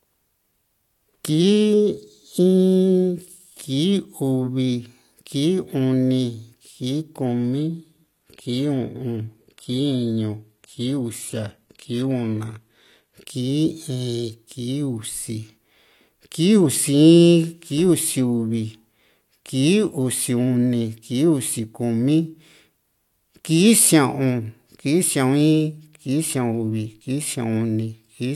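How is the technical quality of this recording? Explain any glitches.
The recording has one clear glitch: from 7.26 to 13.26 s, the adaptive stream drops to a lower bitrate. When the connection slowed, the player switched to a much leaner encoding, which sounds like a move from a moderate-bitrate stream to a very low-bitrate one with synthesized highs. The speech abruptly turns dull and artificial, with no gap. On a spectrogram, nothing appears above 14.9 kHz for those six seconds, and the stretch starts and ends abruptly.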